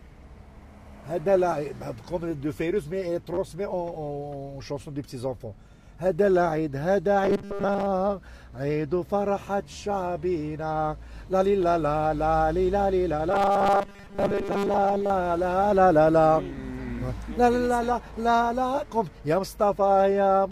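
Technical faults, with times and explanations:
3.34–3.38 s and 9.73–9.75 s, repeated buffer: fresh audio arrived late, so the last block was replayed three extra times, then twice. Each repeat lasts about 11.6 ms, which fits a 512-sample buffer. Hard joins give a brief stuttering click, with essentially nothing skipped.
7.24–7.87 s and 13.31–15.10 s, robotic sound from repeated short buffers: the likely cause is delivery stalling while the player loops a tiny slice every 5 ms, replacing most of the real audio. That loop imposes a steady 200 Hz buzz, a rigid metallic tone only loosely tracking the sound.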